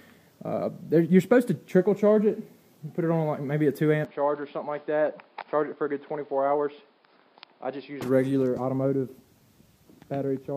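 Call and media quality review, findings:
Dull, boxy sound 4.05–8.02 s, no gap at either switch. Likely input switched to a poorer device. Spectrogram: content cut off above 5.1 kHz, new noise floor roughly 35 dB down. Waveform: envelope drops by roughly 5 dB, then recovers.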